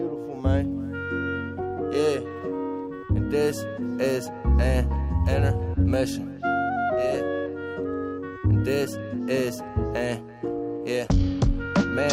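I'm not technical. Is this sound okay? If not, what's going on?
Yes, nothing here sounds wrong; no faults to report.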